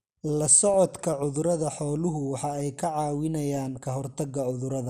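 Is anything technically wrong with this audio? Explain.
Yes. Throughout the clip the speech sounds dull, with a granular, gurgling edge. This is likely MP2 compression, fitting a stream of around 80 kbps. Too few bits leave upper sub-bands switched off and the remaining bands coarsely quantised.

DAB burbling occurs from 0.57 to 0.74 s, just before "cudurada xooluhu waxa ay", and again from 3.57 to 3.85 s. Bit errors, at a small fraction of a percent, slip past error correction. Corrupted scale factors make single sub-bands jump in level for up to a frame.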